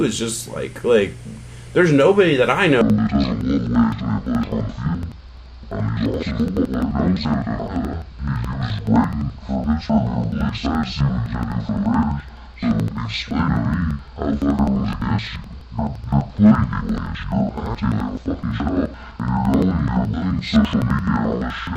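From 2.81 s to the end, interleaved audio is read as planar. Each block of about 85 ms splits into left and right halves, both played at half speed. The sound drops an octave, doubles and chops at 11.7 Hz, which fits a 4096-sample block.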